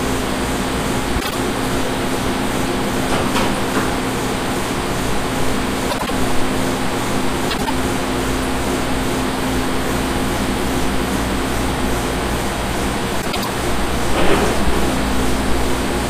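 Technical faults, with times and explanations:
1.20–1.35 s, 5.90–6.11 s, 7.49–7.70 s, 13.21–13.47 s: frames out of order. In each stretch, two adjacent blocks of about 52, 78, 78 and 105 ms play swapped, giving a garbled flutter. Unlike a dropout or repeat, nothing is lost or doubled.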